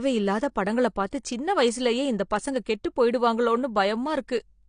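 Across the whole speech clip, nothing is present above 9.8 kHz: a spectrogram shows a hard, flat ceiling at that height from start to finish, with the area above it empty, and the speech sounds dull, lacking crisp sibilance and air. The likely cause is low-bitrate audio saved at a high bitrate. The cut-off fits a first pass through a low-bitrate codec such as AAC-LC near 32 kbit/s, and a later high-bitrate MP3 encoding could not restore what it discarded.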